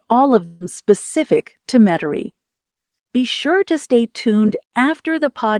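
At 0.45 s a burst of packet loss cuts in and lasts until 0.63 s. Packets went missing, and the receiver filled about 149 ms by extending the last sound while fading it down. This gives a held buzz or a fading hiss. Speech resumes with about 140 ms skipped.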